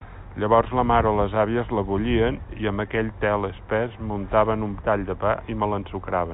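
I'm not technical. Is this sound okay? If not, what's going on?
Yes, nothing stood out on listening to this speech, which has the narrower sound of an ordinary phone call.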